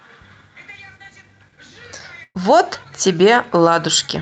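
At 2.23 to 2.37 s, a burst of packet loss drops 120 ms. Concealment stretches the last sound into a fading hold, seen as smeared flat bands, then a short silent gap.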